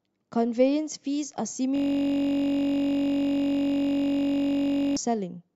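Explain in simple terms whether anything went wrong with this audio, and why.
A system hang loop from 1.76 to 4.97 s: the computer froze, replaying the same 21 ms piece of sound over and over, heard as a steady buzz.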